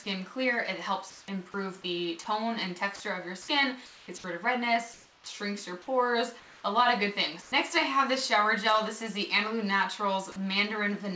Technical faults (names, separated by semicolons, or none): comfort noise in place of the background; sound dropped by the voice detector; onset clipped by the voice detector